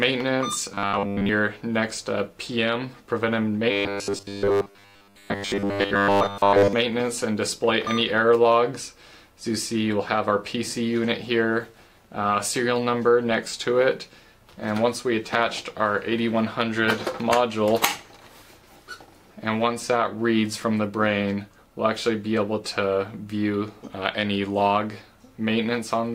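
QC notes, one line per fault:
0.72–1.29 s and 3.71–6.73 s, robotic sound from repeated short buffers: audio likely arrived too seldom, so the output looped the last 10 ms chunk in place of the missing audio. Most of the first stretch and all of the second became a rigid, metallic 100 Hz buzz.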